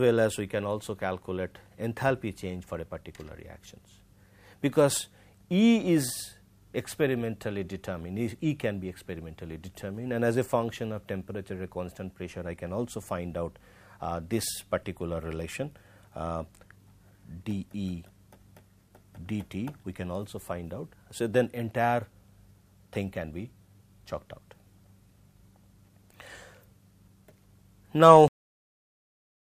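At 28.28 s the audio has a cut-off end. The final stretch was never written out or played back. The sound stops mid-event, with no natural decay. Digital silence follows from 28.28 s to 29.41 s.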